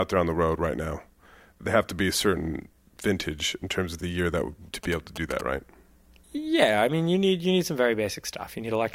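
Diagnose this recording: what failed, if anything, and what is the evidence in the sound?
GSM signalling bursts got into the analogue wiring from 4.84 to 5.41 s. Over the speech there is a galloping dit-dit-dit of short buzzes repeating at 217 Hz, roughly 10 dB below the speech. A nearby 2G phone sent a short group of signalling bursts, and the audio circuitry rectified them into audible pulses. Mains hum is a steady 50 or 60 Hz tone; this buzz comes in gated, rhythmic clusters that start and stop abruptly.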